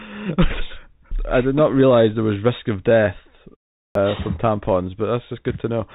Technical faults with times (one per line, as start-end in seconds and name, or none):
0.00-5.95 Bluetooth CVSD headset codec
3.86-3.95 clipped start after a pause